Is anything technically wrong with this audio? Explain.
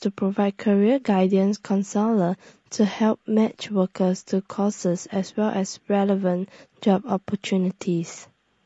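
Yes, the speech carries plainly audible coding damage from start to finish, most likely low-delay AAC compression of the AAC-ELD kind used for video calls. That codec works in very short frames, so it can't separate the voice's pitch harmonics cleanly, and at a rate that sounds around 32 kbps it runs short of bits. You hear it as a rough, grainy voice, with noise filling the gaps between harmonics and a top end that sounds thinned or synthetic.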